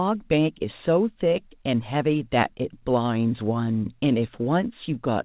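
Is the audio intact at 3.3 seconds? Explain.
Yes, the audio at 3.3 seconds is intact, carrying only the narrow, telephone-like sound of the G.711 mu-law call path, which leaves nothing above 4 kHz.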